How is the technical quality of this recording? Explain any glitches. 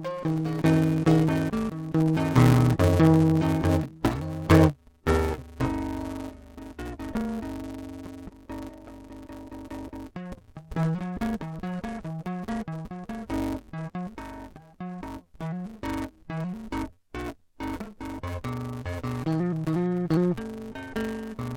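The technical quality is poor: the music is damaged for its whole length by interleaved audio read as planar. Each block of alternating left and right samples is split in half, first half taken as left, second as right, so both channels play at half speed but overall tempo holds. The blocks are short, about 5.8 ms, which fits a 256-sample block, so instead of an octave drop the sound turns dull and robotic, with a buzz at 172 Hz.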